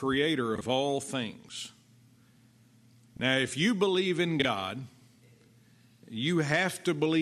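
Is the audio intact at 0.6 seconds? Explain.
No. From 0.56 to 0.61 s, frames out of order swap two adjacent blocks of about 26 ms, giving a brief garbled flutter.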